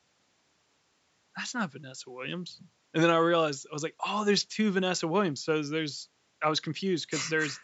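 Nothing stood out on listening to this speech clip, which carries the usual thinned low end and 8 kHz top of call microphone processing.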